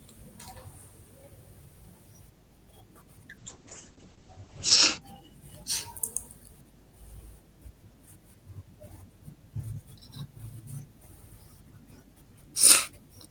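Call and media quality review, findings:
Call bitrate drop, 3.38–5.07 s: speech turns coarse and watery, top end cut from 20 kHz to 8 kHz for 1.38 s at worst. Opus encoder reacting to a bandwidth estimate fall, consistent with 32 kbps dropping near 9 kbps.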